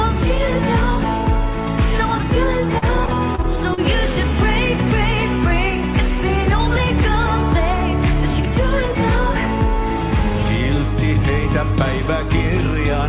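Between 2.78 and 3.79 s, repeated packet loss left five holes of up to 38 ms each, each patched by extending the preceding sound. That repeated patching makes this second of the 4 kHz-limited call audio choppy and robotic, with fragments missing.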